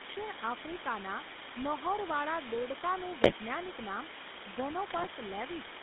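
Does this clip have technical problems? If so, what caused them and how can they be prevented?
Yes. Low bit depth with dither runs throughout: the audio sounds reduced to about 3 bits, and the dither turns the rounding error into a steady hiss roughly as loud as the speech. Prevent it by recording and exporting at 16 or 24 bits.

The GSM full-rate codec also runs throughout. It rebuilds speech from a vocal-tract model driven by sparse pulses, giving buzzy, gravelly roughness within a 200 Hz to 3.6 kHz band. Prevent it by avoiding 2G calls and using a wideband codec.

GSM bit errors occur at 3.22–3.33 s and 4.86–5.08 s. Corrupted filter, pitch and gain values distort the spectrum and level, producing squawks and gargling bursts. Prevent them with a stronger signal or a more robust link.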